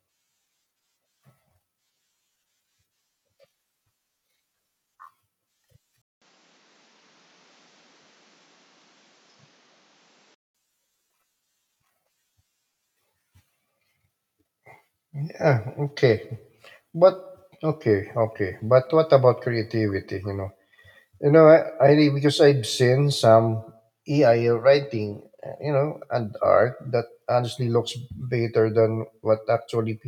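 From 6.02 to 10.55 s the input likely switched to a poorer device. After a 200 ms gap, the speech loses everything above 7.6 kHz and gains faint background noise.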